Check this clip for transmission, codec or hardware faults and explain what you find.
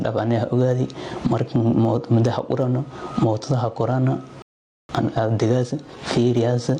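Three faults are audible: a level problem across the whole clip and a break near the end followed by hurried audio.

Gain pumping runs throughout. The input gain is likely set far too high, with a fast limiter or compressor clamping down on each loud sound. The gain ducks under every loud sound, swinging by around 20 dB, so the sound is squashed and breathing.

A playback stall occurs from 4.42 to 4.89 s. The player most likely ran short of data or had its thread blocked, so the output falls silent for about 0.47 s in mid-flow before the audio resumes.

Time-compressed catch-up follows from 4.89 s to the end. To work off the backlog built up during the stall, the player cuts out small slices and cross-fades the joins, running at 1.1 times normal speed. The audio sounds hurried at its original pitch.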